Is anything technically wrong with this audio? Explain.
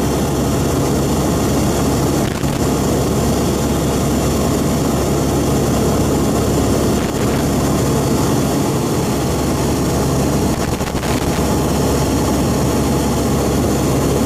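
Yes, there is loose connector crackle in three bursts: 2.25 to 2.59 s, 6.98 to 7.42 s, and 10.54 to 11.38 s, the last lasting about 0.8 s. A poorly seated or dirty contact repeatedly makes and breaks the signal path, chopping the audio into an irregular scratchy crackle. Unlike evenly spaced digital clicks or the steady bed of vinyl surface noise, these bursts are short, erratic clusters that start and stop abruptly.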